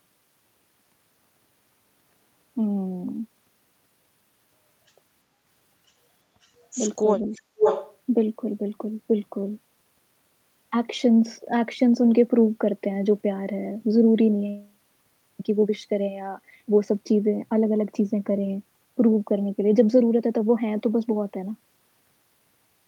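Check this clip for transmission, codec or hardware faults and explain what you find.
The clip shows two acoustic echo control faults, clustered between 6.4 and 8 s.

Echo leak at 6.42–6.48 s, 7.33–7.41 s and 7.57–7.96 s: a copy of the speech returns 527 ms late, likely because a far-end loudspeaker echo slipped past the canceller. The first two scraps are very faint. The last is about as loud as the speech itself. The fixed half-second lag distinguishes it from room reverberation.

Speech suppressed in double talk at 7.24–7.58 s: the talker's level dips sharply, by around 40 dB at its deepest, for about a fifth of a second in total. This is likely the canceller ducking its own talker while the echo was present. The dip coincides with competing sound, which distinguishes it from a network dropout.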